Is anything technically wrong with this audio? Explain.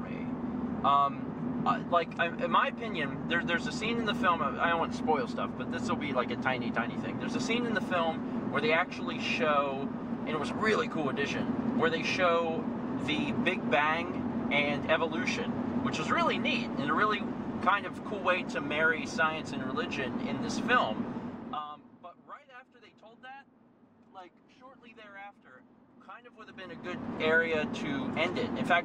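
Yes. Zipper noise occurs from 21.01 to 22.04 s, as the level falls about 20 dB, and from 26.26 to 27.10 s, as it rises about 20 dB in 1 dB steps. The gain jumps without smoothing, around 40 times a second, and each jump clicks, so a fast ticking rides on the sound.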